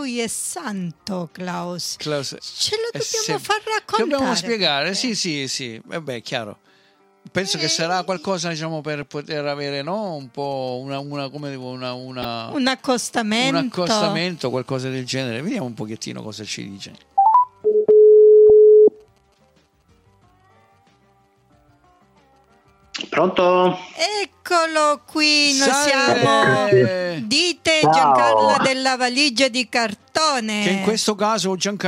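From 1.44 to 3.44 s there is Wi-Fi interference. A faint ticking runs under the sound, around 40 dB below it. The ticks repeat every 102.4 ms, close to ten per second. That spacing matches a Wi-Fi beacon. A nearby radio's bursts are being picked up and rectified by the audio circuit. The circuit turns them into audible clicks.

DAB burbling appears three times. The first is at 9.03 to 9.05 s, the second at 12.22 to 12.25 s, and the last at 18.50 s. Each is brief. Reception was weak. A small fraction of a percent of bits arrived wrong and slipped past error correction. Corrupted samples in the MP2 data then put short blips of noise into single sub-bands.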